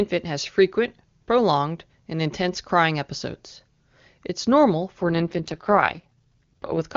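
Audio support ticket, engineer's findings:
AMR rate drop, 5.02–6.85 s: speech rough, raspy, synthetic after clean HD Voice; same band, no gap. Fits AMR-WB stepping from top mode to about 6.6 kbit/s, bits shifted to error protection. Spectrogram: blurred harmonics, noisier fill, unchanged upper edge.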